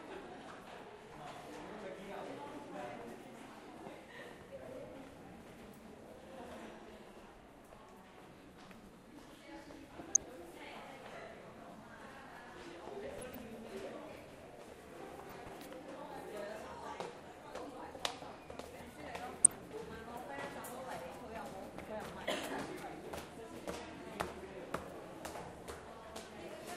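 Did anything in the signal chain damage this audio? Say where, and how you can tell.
Yes, in reception and decoding: weak DAB reception let bit errors, at a rate well under one percent, slip past error correction into the MP2 data, corrupting sub-band samples and scale factors. This is DAB burbling, with bubbly blips at 4.42 to 4.56, 9.98 to 10.23, 13.18 to 13.42, 15.25 to 15.49 and 19.41 to 19.64 s.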